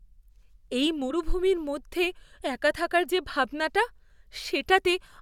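At 1.09 to 1.11 s the speech jumps forward by a single compressed frame, just before "মধ্যে একা থাকার যে". This is a case of compressed frames skipped. One frame, about 23.2 ms long, was either missing from the stream or rejected by the decoder as damaged, so roughly 20 ms of audio never plays.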